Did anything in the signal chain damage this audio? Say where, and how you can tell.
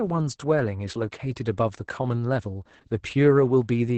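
Yes, at the codec stage, by Opus voice compression throughout the speech. There is no content above 8.7 kHz, and the voice sounds muffled, hoarse and faintly robotic. That points to SILK wideband coding with coarse excitation at a low bitrate, around 10 kbps.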